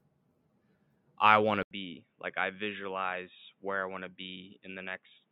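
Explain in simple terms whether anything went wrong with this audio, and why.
Something does go wrong at 1.63 seconds, right after "I want to". The sound cuts out for a brief moment, about 80 milliseconds. It then comes back duller and a little quieter, with a faint new background noise underneath. From there to the end, nothing above 3.8 kHz gets through. That is why it sounds boxy, like a phone call. The likely cause is an input switched to a poorer device, such as a headset microphone.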